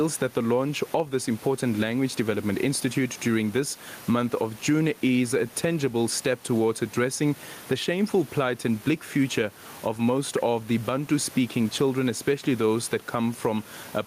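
Gain pumping runs through the whole recording. The room noise sits about 29 dB below the speech, and the gain swings by roughly ten decibels. The likely cause is the input gain being set far too high, with a fast limiter or compressor clamping down on each loud syllable. That squeezes loud and quiet passages together, so the speech sounds flattened.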